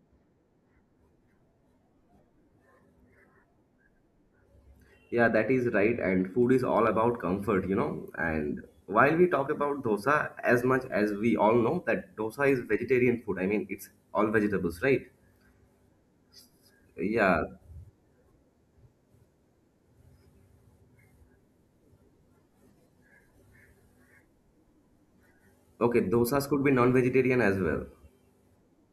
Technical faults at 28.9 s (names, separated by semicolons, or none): pre-emphasis left on